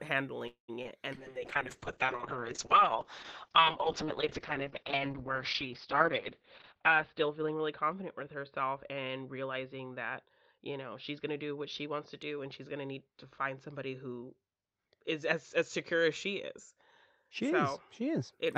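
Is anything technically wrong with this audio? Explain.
Yes, this speech clip has four technical faults.

Call audio freeze, 0.47 to 0.72 s: packets were likely held up in transit and the receiver's buffer ran dry. The last sound is stretched into a fading buzz for about 210 ms, including about 100 ms of silence, then speech resumes where it stopped, with nothing lost.

Short concealed packet loss, 0.83 to 0.87 s: about 20 ms of audio never reached the decoder in time. The receiver patched the hole by extending the preceding sound, giving a brief smear or wobble before the real signal blends back in.

Call bitrate drop, 1.14 to 18.38 s: the bandwidth estimate collapsed, pushing the encoder from 32 kbps down to 6 kbps, where it sits for about 5.4 s. Coarser coding and a bandwidth cut from 20 kHz to 6 kHz make the speech rough, watery and muffled.

Jitter buffer speed-up, 10.14 to 11.94 s: the buffer held too much audio, so the receiver repeatedly cut out pitch-period-sized pieces, about a fifth of a second in total. 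Speech runs at 110% speed with unchanged pitch and sounds hurried.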